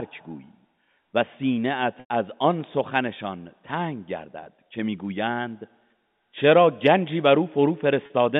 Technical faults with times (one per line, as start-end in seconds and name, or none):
1.65 dropped samples
2.00-2.10 packet loss with pitch repetition
4.23 dropped samples
4.44-4.46 packet loss with pitch repetition
8.06-8.10 packet loss with pitch repetition